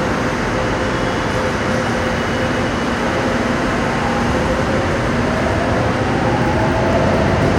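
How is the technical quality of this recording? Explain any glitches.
The recording has one fault, a doubled audio track that runs through the whole clip. A second, slower capture path or an out-of-step edit has likely mixed the same sound in twice. A full-band copy, about 5 dB quieter, trails every event by roughly 150 ms, giving a dry, flamming slapback with no decay or room colour.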